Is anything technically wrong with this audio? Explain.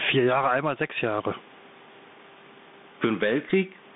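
Yes. Throughout the speech, the gain swings by around 15 dB, so loud and quiet passages sit squashed together. This gain pumping is likely caused by the input gain being set far too high, with a fast limiter or compressor clamping down on every peak. There is also room noise, about 43 dB under the speech.

Also throughout, the speech is confined to roughly 150 Hz to 3.6 kHz, with scratchy s sounds, grit on loud bright syllables and a granular hiss beneath. This is plainly audible Bluetooth CVSD headset codec damage, consistent with a 64 kbit/s link. CVSD sends one bit per sample saying only up or down with an adapting step size, so fast high-frequency movement outruns the step and distorts.

At 3.50 s there is a brief glitch, a short tick or stutter lasting about 12 ms. This is a Bluetooth headset packet being repeated. About 7.5 ms of audio was lost between headset and phone, which suggests two dropped packets, and the chip decoded the previous packet's bits again in place of the missing audio.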